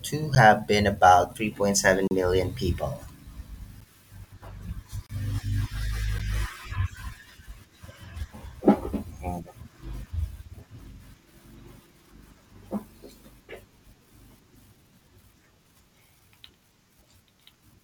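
Blocks of digital silence cut the speech at 0.35 s, 2.08 to 2.11 s, 3.80 s, 5.06 to 5.10 s and 6.18 s, where zeros replaced the samples. The 10 ms gaps sound as ticks and the 30 to 34 ms ones as short holes. Abrupt cuts at each edge, rather than a fade, set them apart.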